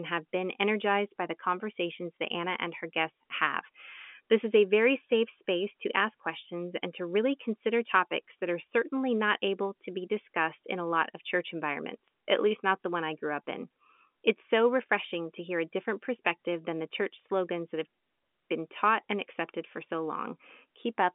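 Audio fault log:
No faults detected.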